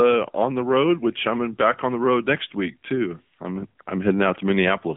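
Speech that sounds thin, boxed-in and buzzy from start to finish, with a synthetic edge and no brightness above about 3.7 kHz: the hallmarks of the AMR narrowband mobile codec. The whole clip sits in a telephone band of roughly 150 Hz to 3.5 kHz, and the plainly audible coding damage fits a low AMR-NB mode near 8 kbps, where a vocal-tract model excited by sparse pulses per 5 ms loses natural texture.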